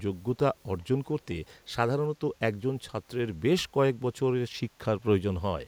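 Around 0.80 to 0.85 s there's a brief echo leak: a faint copy of the speech trailing about 392 ms behind, very quiet, likely from an echo canceller missing loudspeaker pickup.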